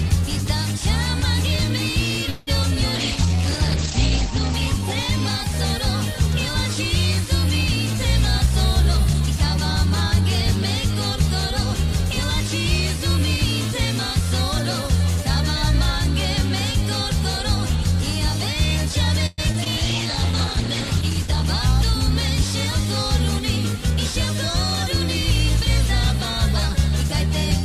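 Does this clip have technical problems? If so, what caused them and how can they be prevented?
Yes, there are several network-related faults.

Call audio freeze, 2.29 to 2.49 s: the sound stalls for about 175 ms, with the last moment stretched into a fading buzz or hiss before playback resumes where it stopped. Nothing is lost; the stream is simply delayed by that amount. The likely cause is packets held up in transit, emptying the jitter buffer so the receiver had to improvise. On a spectrogram, the last frame's harmonics smear flat and fade; on a waveform, a decaying tail then a clean restart. A larger or more adaptive jitter buffer and a steadier network path prevent this.

Skip ahead, 2.63 to 2.65 s: playback jumps forward, dropping roughly 70 ms of audio with almost no gap. A stretch was dropped in transit or discarded by an overflowing jitter buffer, cutting the delay by around 50 ms. 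A waveform shows two unrelated segments butted together; a spectrogram shows an abrupt vertical discontinuity. Letting the buffer shrink gradually by time-stretching, rather than discarding audio, prevents this.

Call bitrate drop, 2.97 to 5.77 s and 19.79 to 21.54 s: the encoder was pushed from 48 kbps down to 10 kbps in the first and 13 kbps in the second, staying at the lowest rate for 1.18 s and 1.69 s. In the first drop the bandwidth shrinks from 20 kHz to 8 kHz, so the sound turns muffled and rough. On a spectrogram, energy above 8 kHz disappears abruptly during the first drop and returns when the rate recovers. Better bandwidth headroom and smoother congestion control keep the bitrate from collapsing.

Jitter buffer slow-down, 3.26 to 4.80 s: with the buffer running low, the receiver repeated single pitch periods and pause fragments, adding 63 ms and playing at 97% speed with unchanged pitch. 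The result is slightly drawn-out sound. A spectrogram shows slightly elongated features; a waveform shows near-identical cycles repeated. A steadier network and a buffer target that starts with enough reserve prevent this.

Jitter buffer speed-up, 8.46 to 10.96 s and 21.41 to 23.98 s: the buffer held too much audio, so short pitch-period pieces were cut out repeatedly. The first stretch runs at 106% and removes roughly 150 ms; the second runs at 102% and removes about 50 ms. The pitch stays the same, and the first stretch sounds hurried. On a spectrogram, events are compressed in time with pitch bands unchanged. Avoiding bursty packet delivery keeps the buffer near its target and prevents this.

Repeated packet loss (robotic sound), 19.26 to 19.67 s: three gaps in quick succession, the longest 116 ms. They are patched with 150 ms of synthesised continuation, while 40 ms is truly missing, so 37% of that span is concealed. 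The result is choppy sound with pieces missing. A spectrogram shows repeated smeared, flattened harmonic patches; a waveform shows repetitive periodic filler. Forward error correction and a more reliable link prevent this.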